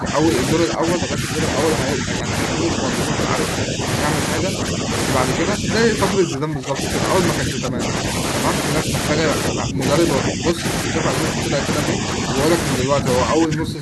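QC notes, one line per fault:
0.0–1.3 s, 1.96–3.31 s, 3.62–3.82 s, 4.4–4.91 s, 5.38–6.8 s, 7.4–8.03 s, 8.84–12.35 s and 12.8–13.82 s: speech suppressed in double talk. The talker's level sinks in patches. The dips are only part of most spans, not all of them. Mild ones drop about 5 dB. The worst, between 5.38 and 6.8 s, drop about 20 dB. The likely cause is an echo canceller facing both ends talking at once. It could not tell the near talker from loudspeaker echo, so it pulled the signal down.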